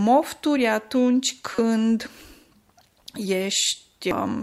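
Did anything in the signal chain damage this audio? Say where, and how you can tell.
Yes. The damage is at the codec stage: damaged data in a compressed stream. There is a short glitch from 1.55 to 1.59 s and a brief blip at 4.11 s. At each point, corrupted frame bytes made the decoder misread the data and lose sync until it found a valid frame header.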